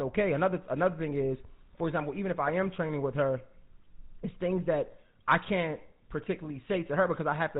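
GSM full-rate codec damage runs from start to end of the speech. The codec builds a model of the vocal tract and drives it with a sparse train of regularly spaced pulses, keeping only every third excitation sample, a coarseness which fits the 13 kbps full-rate mode. Nothing above 4 kHz survives, so the top end is gone. The result is a plainly audible buzzy, gravelly roughness laid over every syllable.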